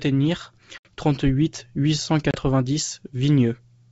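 At 0.78 s the speech drops into a hard-edged silence of about 70 ms, then comes back slightly distorted with some roughness that settles within the next few tens of milliseconds. The same happens at 2.31 s, just after "huit cent", with a gap of about 30 ms. Both are packet loss on an ADPCM call: the decoder's adaptive predictor and step size lost track of the sender's during the gap. The wideband G.722 coding itself is heard as clean.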